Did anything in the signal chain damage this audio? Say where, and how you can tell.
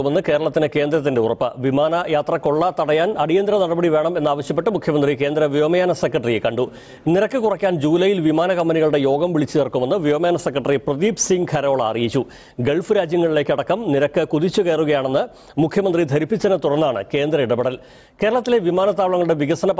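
Yes. There's gain pumping all the way through: the gain is pulled down by something like 10 dB the moment a loud sound arrives, so loud and quiet passages sit squashed close together. That pumping points to a fast limiter or compressor clamping down, most likely because the input gain was set far too hot for the microphone. The call processing itself, with its top end stopping at 8 kHz, isn't the culprit.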